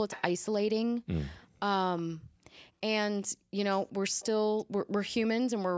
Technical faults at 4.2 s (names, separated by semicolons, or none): echo leak